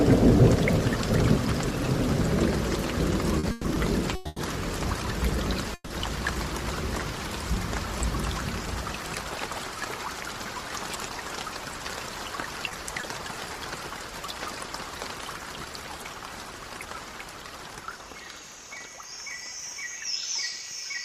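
From 3.39 to 5.92 s there are repeated stalls (stutter). Packets arrived late six times, so the buffer emptied. The last sound was stretched, 160 ms at most, and the audio drags.

From 10.79 to 11.95 s comes a jitter buffer speed-up. Excess buffered audio was trimmed in small pieces, about a tenth of a second overall. The sound runs 110% fast at unchanged pitch.

At 12.69 to 12.73 s and 13.01 to 13.05 s there is short concealed packet loss. Each time 20 ms went missing and was patched, leaving a brief smear.

From 16.21 to 17.05 s a milder speed-up runs at 104%, trimming a few hundredths of a second.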